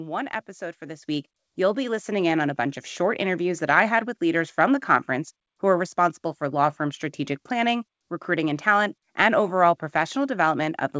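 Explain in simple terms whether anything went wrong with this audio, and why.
At about 1.02 seconds the whole recording suddenly gets louder. This is a microphone volume stepped up fault. The call software judged the microphone too quiet and raised its input volume in a single jump instead of gradually. The voice and the background noise both rise together, at the same instant. The audio travelled through a WebRTC call path, which leaves nothing above 8 kHz, so it sounds dull.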